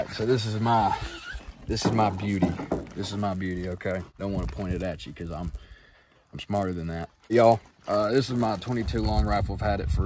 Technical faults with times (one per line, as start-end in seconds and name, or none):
1.43-9.43 resampler restarted on every block